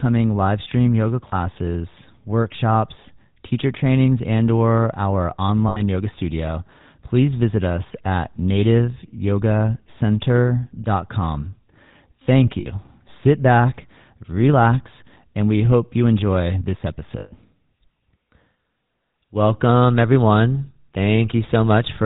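GSM full-rate codec damage runs through the whole clip. The speech is rebuilt from a vocal-tract model driven by evenly spaced pulses, with only a third of the excitation samples kept. The result is a plainly audible buzzy, gravelly roughness over every syllable, with nothing above 4 kHz. The dull, coarse character fits a 13 kbps full-rate stream.

Lost GSM frames occur at 1.28 to 1.33 s, 5.68 to 5.81 s, 12.6 to 12.67 s and 17.2 to 17.33 s. In each gap the decoder had no good data, so it reused the last good frame's settings. The speech briefly freezes into a rough, metallic ring. The dropouts last about 40, 80, 60 and 120 ms, which points to two, four, three and six missing frames. The longest, at 17.2 s, rings before the speech returns.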